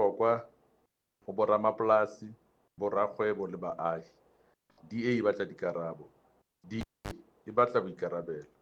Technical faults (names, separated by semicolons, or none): cable pulled and plugged in